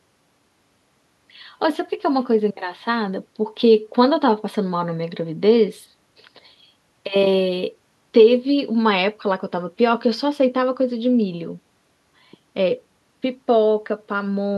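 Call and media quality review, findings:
No audible defects found in the speech on review; nothing to escalate.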